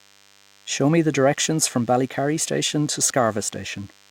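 DECT cordless phone buzz runs throughout this speech clip as a thin, steady buzz at 100 Hz, sitting roughly 35 dB below the speech. A DECT handset or base station close to the recording chain transmits a brief radio burst every 10 ms, and some part of the audio circuitry rectifies that RF into an audible pulse train. The sharp, repeating pulses produce the 100 Hz fundamental plus a dense stack of harmonics, which gives the buzz its thin texture.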